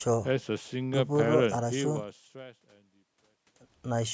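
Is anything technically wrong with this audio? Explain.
No, nothing here is a problem: the speech eases into a gentle fade-out from about a second and a half in, the way an editor would finish a clip, and the top end stops at 8 kHz because it went through a call's microphone processing, which is just how that path sounds.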